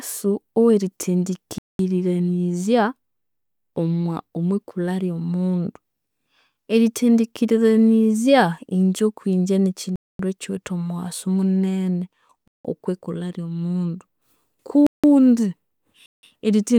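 A speech clip with five blocks of digital silence at 1.58–1.79 s, 9.96–10.19 s, 12.48–12.65 s, 14.87–15.04 s and 16.06–16.23 s, each roughly 0.17–0.24 s long. The last three match exactly, fitting unfilled 8192-sample output buffers. Each shows as a flat, near-silent stretch of waveform and blank spectrogram columns, with abrupt edges.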